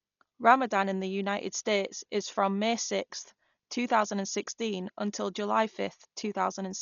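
Throughout the speech, nothing reaches above 7 kHz, and the sound is dull, with a rough, fluttering noise clinging to voiced tones. This heavy damage is likely Dolby Digital compression at a starved rate, such as 40 kbps, where many frequency lines receive no mantissa bits and are filled with dither noise.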